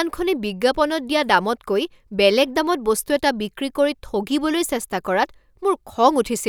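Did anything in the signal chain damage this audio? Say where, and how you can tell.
No, nothing stood out on listening that would point to damage anywhere in the signal chain.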